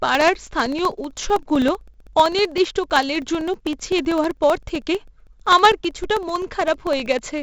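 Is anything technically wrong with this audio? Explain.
Yes, two faults are audible.

4-bit ADPCM compression runs through the whole clip, and the damage is heavy. Each sample is coded as a coarse 4-bit step from a prediction, so the error becomes a gritty hiss that rises and falls with the speech, with roughness on sharp onsets where the adaptive step lags. Nothing is present above 7.7 kHz, which fits a 16 kHz sample rate and a data rate of about 64 kbps, so the speech also sounds dull.

Periodic USB or driver dropouts run from 0.09 s to 7.38 s, one every 64 ms, about a hundred in all. Each time, roughly a millisecond of audio is lost and replaced with silence, as a blocked bus or driver misses its deadline at a fixed interval. The gaps produce a steady train of ticks at about 16 per second, heard whenever speech is present.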